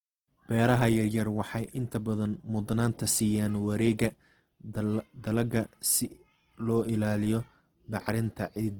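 A speech recording carries plainly audible Opus compression from start to finish. The voice sounds grainy and rough, with a noisy texture in place of clean tones. Bandwidth stays full, up to about 20.1 kHz. This points to the music mode at a low rate, likely near 16 kbps.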